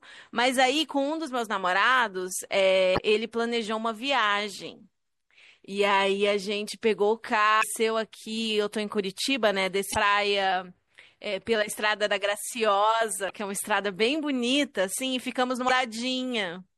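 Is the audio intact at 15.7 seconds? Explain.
No. From 15.66 to 15.71 s there is a brief chirp, squawk, click or short hole. This is damaged data in the compressed stream: corrupted bytes make the decoder misread frames and lose sync until it finds the next frame header. Underneath, the speech sounds watery and swirly, likely from MP3 compression at a bitrate that sounds as low as about 64 kbps.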